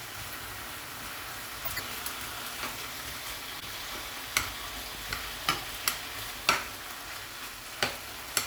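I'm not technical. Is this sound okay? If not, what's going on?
No. Twice, a chunk of the compressed audio data was damaged and the player decoded it anyway. This is a corrupt frame decoded fault. The garbled data lands at the wrong pitches, giving a brief chirpy, noisy burst from 1.65 to 1.80 s and a shorter one from 3.59 to 3.67 s.

Then, from 4.95 to 5.13 s, there's a loud pop: two sharp pops in quick succession, louder than the sound itself, which carries on underneath. They likely came from a sudden electrical jolt, such as a plug, a switch or static.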